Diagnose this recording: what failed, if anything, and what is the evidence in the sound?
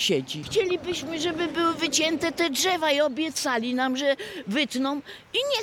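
Nothing stood out on listening that would point to a failure at any stage of the chain.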